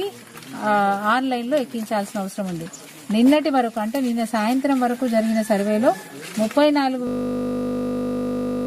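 At 7.07 s the audio locks into a system hang loop that runs right to the end. Something froze upstream while the output kept replaying the same 20 ms slice of its buffer, so you hear a steady 50 Hz buzz instead of sound.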